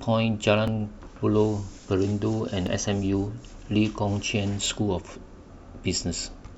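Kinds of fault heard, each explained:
Overlap between stream segments: the time stamps of consecutive stream segments overlap, so the player discards a stretch of speech it wrongly treats as duplicated, and the waveform jumps across the gap. Here roughly 15 to 18 ms of speech vanishes each time, heard as a small click or skip at 0.68, 2.67 and 4.66 s. The events recur every 2.0 seconds, matching the segment length, which gives the skips their regular rhythm.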